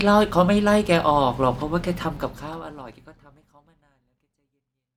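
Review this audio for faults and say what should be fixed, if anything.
No faults; nothing needs fixing.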